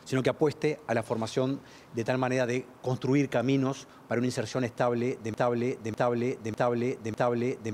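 At 5.34 s the sound locks into a broken-record loop. A 0.6 s fragment repeats exactly, back to back, four times. It runs to the end. The likely cause is a stalled player or stream resending its last fragment. The intended audio is lost.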